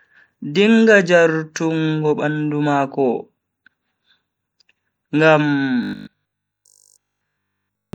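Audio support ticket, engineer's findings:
Whole clip: watery, swirly texture on the speech, plainly audible. Likely MP3 compression at around 64 kbps, with weak frequency lines dropping in and out frame to frame.

5.83–7.93 s: speech collapses into a rigid metallic buzz at 50 Hz, loosely tracking the words. Likely the playback path re-looping 20 ms buffers for essentially that whole stretch while fresh audio gets skipped. Robotic sound from repeated short buffers.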